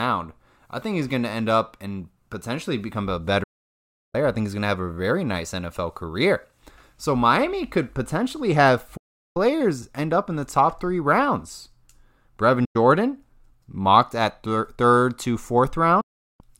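Digital broadcast dropouts cut the speech at 3.43 to 4.15 s, after "and potentially become a"; 8.97 to 9.37 s; 12.65 to 12.76 s; and 16.01 to 16.41 s. The receiver lost good frames. Sound fades to silence within about 8 ms. The missing audio never returns.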